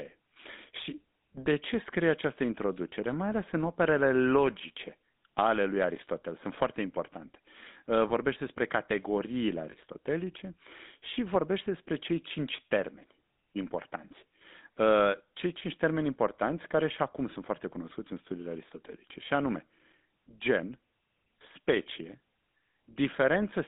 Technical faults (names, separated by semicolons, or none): GSM full-rate codec; lost GSM frames